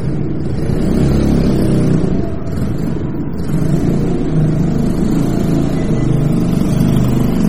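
Throughout, the sound has a watery, swirly texture with smeared attacks, likely MP3 compression at heavy damage, which fits a low bitrate around 32 kbps. From 0.73 to 1.95 s and again from 6.57 to 7.25 s, hard clipping flattens peaks overdriven by about 2 dB, adding crackle on loud moments.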